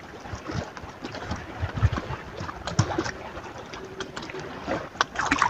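Nothing in the audio sounds wrong at any point, so there's no technical fault to describe here.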